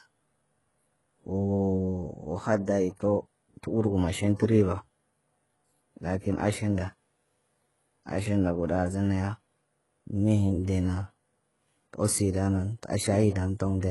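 Throughout the clip the s sounds come across gritty and lispy, with a bright but synthetic, metallic treble that stops dead around 11.5 kHz. This is likely heavy HE-AAC compression: the upper band is rebuilt by copying lower bands upward, which fits a very low bitrate near 12 kbps.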